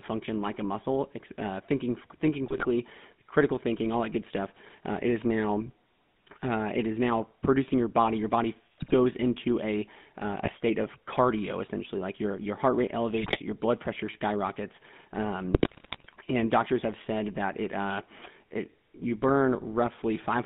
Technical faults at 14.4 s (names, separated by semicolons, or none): GSM full-rate codec